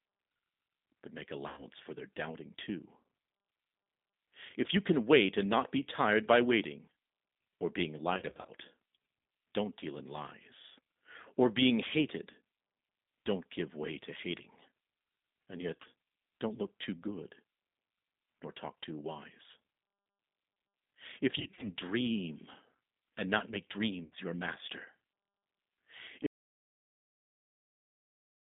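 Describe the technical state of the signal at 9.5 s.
At 9.5 s, as across the whole clip, the speech carries G.729 codec damage: a vocal-tract filter plus sparse pulses rebuilds it, consistent with an 8 kbit/s G.729A line, leaving a rough, synthetic buzz. A spectrogram shows energy confined to 200 Hz–3.7 kHz, empty above.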